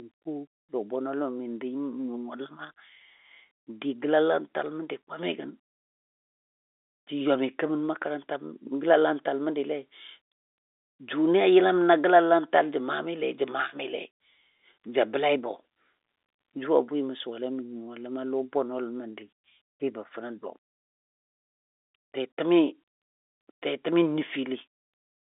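No technical faults can be heard in the speech: it carries the narrow sound of G.711 telephone coding, with the line band running from about 300 Hz to 3.6 kHz and nothing above 3.8 kHz, and any trace of the codec's level-following quantisation hiss is at most faint.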